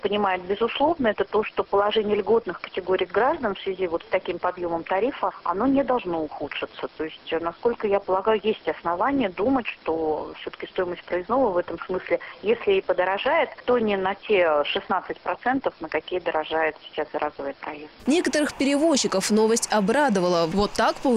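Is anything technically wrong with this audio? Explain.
No, there are no technical faults.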